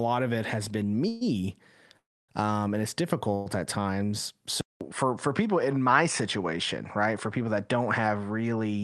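Call audio freezes occur at 1.08 to 1.23 s, 1.97 to 2.31 s and 3.35 to 3.48 s. Each time the speech stalls and a fading buzz or hiss continuing the last sound fills the gap: about 130 ms, then 315 ms, then 110 ms. In the longest, the fill dies to silence for about 270 ms. The likely cause is delayed packets draining the jitter buffer. When the speech resumes it picks up exactly where it stopped, so nothing is lost and each pause simply pushes the rest later.

An input switched to a poorer device at 4.61 s, after a short silence of about 200 ms. From there to the end, the speech loses its top end, with nothing above 10.2 kHz, where the earlier part still reached the roughly 12 kHz limit of the Opus call path. A new noise floor appears around 45 dB below the speech. Loudness stays about the same, so the change is heard as a duller, narrower tone with added background noise, likely from the recording moving to a lower-grade microphone or headset input.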